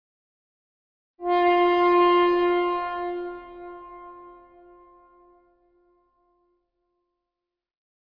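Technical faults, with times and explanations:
No technical faults can be heard.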